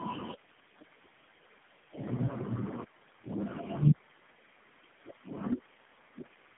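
From start to finish the speech carries tandem speech coding: three low-rate speech codecs in a row, each recoding the last one's damage, which fits a GSM, G.729A and AMR-NB chain. It sounds rough, muffled and warbly; a spectrogram shows nothing above 3.8 kHz and smeared, blotchy harmonics.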